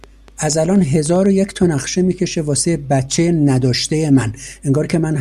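From 0.04 to 1.27 s, a train of clicks ticks over the speech: about ten similar pops at roughly 7.4 per second, unevenly spaced and about as loud as the speech itself. It is likely interference from nearby equipment or a faulty connection or power supply.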